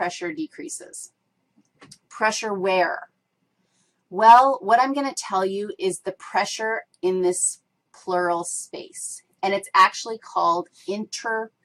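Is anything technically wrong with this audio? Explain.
No, nothing stood out as technically wrong on listening to this audio.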